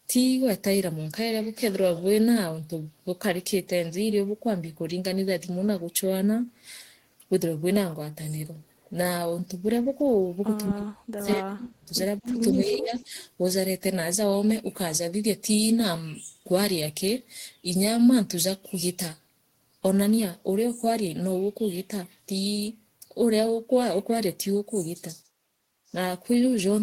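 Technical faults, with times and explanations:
10.7–11.93 s and 12.2–13.13 s, speech suppressed in double talk: the speech dips by roughly 35 dB, then about 15 dB, likely the echo canceller turning down this side's talker along with the loudspeaker echo.
12.65–12.78 s and 12.94–13.03 s, echo leak: speech copies return about 240 ms late, the first fairly audible, the second barely, likely loudspeaker pickup the canceller missed.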